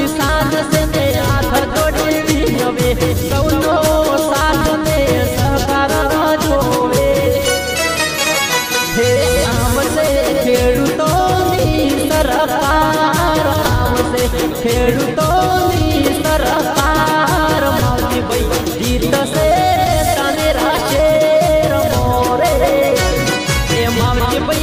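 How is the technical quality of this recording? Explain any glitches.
The technical quality of the recording holds steady, with no glitches to explain.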